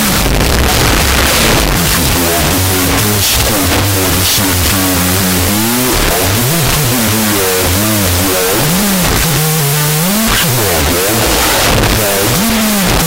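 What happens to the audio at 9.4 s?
At 9.4 s, as everywhere in the clip, there is a wrong sample width: 16-bit data read as unsigned 8-bit bytes, so each byte becomes its own sample. Loud hiss buries the sound, which plays at half speed, an octave low. Swapped byte order would keep the speed and pitch.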